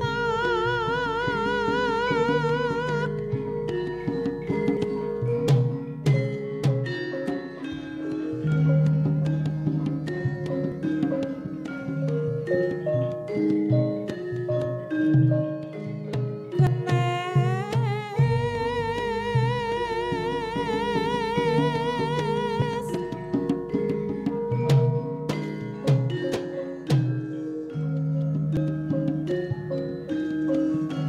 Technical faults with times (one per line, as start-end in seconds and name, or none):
4.77 audio missing between chunks
10.72 audio missing between chunks
16.67 audio missing between chunks
22.62 audio missing between chunks
28.57 audio missing between chunks